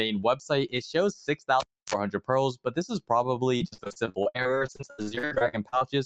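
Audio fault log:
throughout: noise suppressor applied to music or sounds. A suppressor tuned for speech is still running, so it keeps mistaking held tones, ambience and decay tails for noise and pulling them down by around 5 dB, then easing off when something new starts. Onsets come through fairly intact, but the sustained parts sag between them, which gives the whole clip a pumping, thinned-out feel rather than a steady level.
1.60–1.94 s: cable pulled and plugged in. You hear a pop at 1.60 s as the live lead comes out, then roughly 0.29 s of near silence. In between there's a short burst of 50 Hz mains buzz, about 47 ms long, from the tip touching before the ground connects. A second pop follows as the sound comes back at 1.94 s.
3.57–5.83 s: repeated packet loss (robotic sound). Through this stretch the stream keeps dropping short chunks, each one 76 ms at most. Each hole gets filled by stretching out the last bit of sound, and the next gap arrives before things settle, so about 39% of the span ends up synthesized. 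That's why it goes choppy here, with bits audibly missing. The 8 kHz top end you hear throughout is just the Opus call path.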